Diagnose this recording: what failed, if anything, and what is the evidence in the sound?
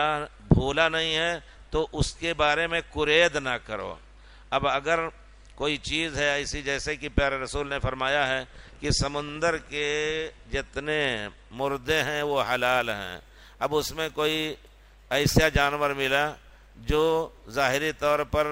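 Imaging from sample-and-hold upsampling at the sample-rate conversion stage, from 11.57 s to the end of the clip. A bright, metallic fizz appears there and rises and falls with the level of the sound. On a spectrogram, a mirrored copy of the content fills roughly 11.0 to 22.1 kHz, about 20 dB below the signal, with its pitch contours running upside down. That fits audio at about 22 kHz being raised to 48 kHz by holding each sample with no smoothing filter. The waveform shows the resulting staircase steps.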